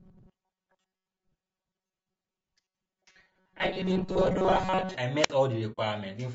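Throughout this speech clip the voice has a rough, grainy texture, with noise filling the gaps between harmonics and a top band that sounds thin and somewhat synthetic. That is plainly audible damage from low-delay AAC compression, likely AAC-ELD at a bitrate around 32 kbps. Its short transform frames resolve the voice's harmonic structure poorly, and too few bits remain to code the spectrum cleanly. From 0.01 to 4.96 s the voice becomes a rigid, metallic buzz at a steady 188 Hz that only loosely tracks the words. This is robotic sound from repeated short buffers. Audio is arriving too seldom, so the playback side likely keeps looping the most recent stretch of about 5.3 ms. The repetition period imposes its own fixed pitch, and most of the real audio in that span, roughly two thirds or more, is skipped. Between 5.22 and 5.31 s there is a brief rise of hiss, then a hole of near silence lasting 53 ms, before the voice returns. 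That pattern is a wireless microphone squelch dropout: the FM radio signal faded far enough that the receiver's squelch muted its output until reception recovered. From 5.72 to 5.79 s a soft-edged gap of 60 ms opens, the sound fading out and back in. This is AAC frame loss with muting, consistent with a pair of lost frames whose spectrum the decoder set to zero, while the overlapping windows smoothed the edges of the hole.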